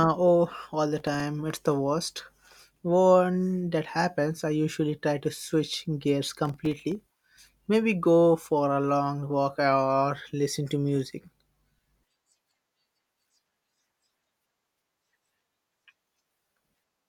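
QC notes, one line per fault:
0.98–1.20 s, processor overload crackle: directly after "oh all the", a gritty burst as the processor misses about ten buffer deadlines over a short stretch; each short buffer, roughly 1.5 ms, drops to silence with hard edges.
6.45–7.00 s, processor overload crackle: after "try to switch gears", a longer tearing stretch of around twenty missed buffers, each gap silent, so the rapid on-off chopping is heard as crackle over the speech until the load clears.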